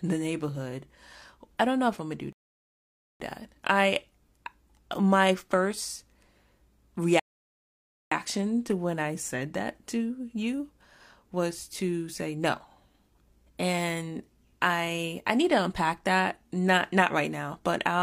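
Speech that twice drops into dead silence and then carries on exactly where it left off, first at 2.33 to 3.20 s right after "if I'm gonna do", adding 0.88 s, then at 7.20 to 8.12 s just before "to when I said", adding 0.92 s. These are rebuffering stalls: playback outran the downloaded audio and paused until more arrived.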